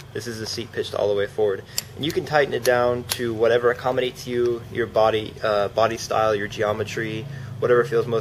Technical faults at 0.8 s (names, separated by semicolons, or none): none